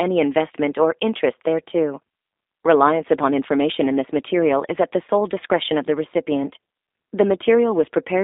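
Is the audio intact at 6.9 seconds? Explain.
No. G.729 codec damage covers the whole clip, 6.9 s included. The speech is resynthesised from a vocal tract model, a pitch predictor and a few pulses per frame, which fits an 8 kbit/s stream. It sounds plainly rough and synthetic, squeezed into 250 Hz to 3.7 kHz.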